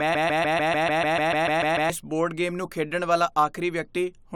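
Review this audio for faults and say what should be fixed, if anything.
Broken-record loop, 0.0 to 1.90 s: the speech opens already caught in a loop, a fragment of about 0.15 s (147.51 ms) repeating exactly and back to back, 12 times, before normal playback resumes at "ਇਸ ਬੋਰਡ ਗੇਮ ਨੂੰ". This most likely comes from the player, encoder or stream stalling and resending the last piece it held, so whatever should have filled those first two seconds is lost and needs re-capturing or re-exporting from the source. To prevent it, detect stalls and output silence or drop frames rather than replaying stale buffer contents.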